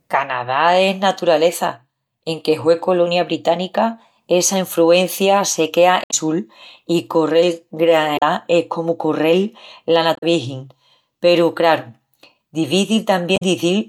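Speech clip with four brief glitches at 6.04 to 6.14 s after "essa enfruencia se quea", 8.16 to 8.22 s, 10.13 to 10.23 s and 13.34 to 13.42 s. This is damaged data in a compressed stream: the decoder misreads corrupted frames, loses sync and resumes at the next valid frame header.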